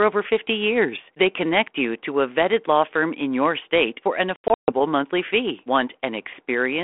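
After "your state for an", from 4.36 to 4.81 s, packet loss on the ADPCM call punches in 240 ms of hard-edged silent gaps, the longest 140 ms, before "monthly fee".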